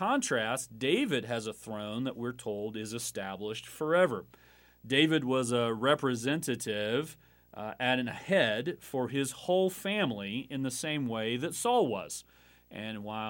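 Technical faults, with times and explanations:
Throughout, video or display buzz: a screen or video cable is leaking its scanning signals into the audio path. This gives a buzz at the 59.94 Hz field rate with hash above it and a high tone at the 15.7 kHz line rate, roughly 35 dB below the speech.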